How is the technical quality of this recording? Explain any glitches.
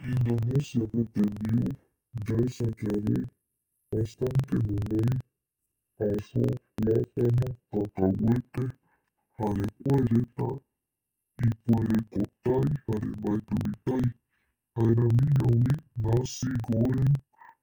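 The recording is seriously damaged by one fault present from start to finish.

Interleaved audio read as planar, throughout: each 42.7 ms block of alternating left-right samples is split in half, each half played as one channel at half speed. The speech drops an octave and sounds doubled and choppy, stuttering at 23.4 Hz, which fits a 2048-sample block.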